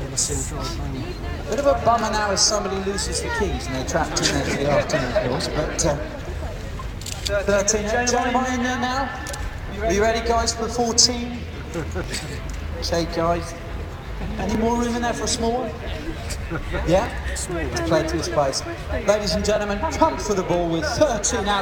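Overlapping chunks at 2.01, 4.52, 7.03, 9.53, 12.04, 14.55, 17.06 and 19.56 s: the audio arrives in 2.5 s blocks that each begin about 7 ms early, so that sliver replays as a regular click.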